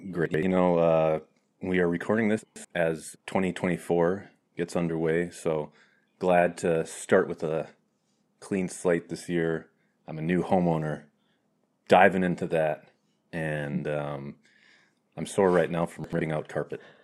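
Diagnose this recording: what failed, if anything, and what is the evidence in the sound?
The failure is in the driver or buffer stage: chunks out of order, each block about 85 ms long. From 0.26 to 0.43 s, just before "know uh we are", and from 16.04 to 16.21 s, after "I'm sore right now", one chunk plays a block late. From 2.39 to 2.65 s, after "uh we are recording", one plays two blocks late. Each sounds like a jumbled stutter. The waveform shows abrupt discontinuities at the joins, and the spectrogram shows vertical broadband lines there and formant tracks jumping backwards.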